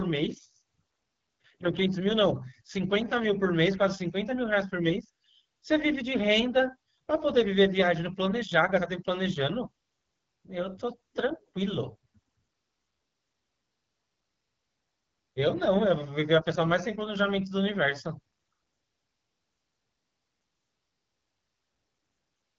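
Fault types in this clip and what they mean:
AMR wideband (HD Voice) codec: The speech has passed through AMR-WB at one of its lowest modes, with a rasp that fits roughly 8.85 kbit/s. At that rate the pulse-driven vocal tract model has too few bits to track the voice closely, so the whole clip sounds rough and gritty, with plainly audible coding damage. The band is capped, with nothing above about 7.4 kHz, and the top end is synthetic noise rather than real detail.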